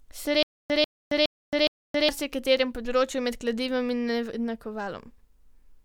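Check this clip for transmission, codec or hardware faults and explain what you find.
One fault is audible in the speech. From 0.43 to 2.09 s there is stutter with silent gaps: a 144 ms burst replays four times, 415 ms apart, with digital silence between, likely from a stalled stream. The repeats are identical, which distinguishes this from random dropouts.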